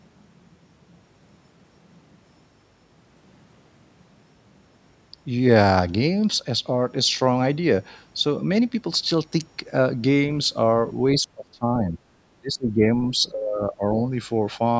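Speech that sinks in three places, from 11.19 to 11.96 s, 12.41 to 12.90 s and 13.10 to 13.84 s, dropping by around 25 dB at its deepest. This is speech suppressed in double talk, likely from an echo canceller mistaking the talker for far-end echo while both sides spoke and turning it down.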